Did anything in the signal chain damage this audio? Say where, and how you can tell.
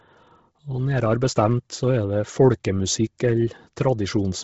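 Yes, at the codec: the whole clip is dead above 7.7 kHz with grainy, noise-filled highs, likely heavy Bluetooth LC3 compression at a low bitrate, around 16 kbps.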